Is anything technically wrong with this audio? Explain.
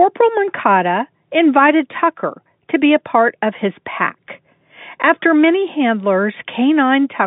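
No, this is ordinary G.711 telephone-band speech, with the line passing roughly 150 Hz to 3.6 kHz and nothing above about 3.7 kHz, as expected for that format.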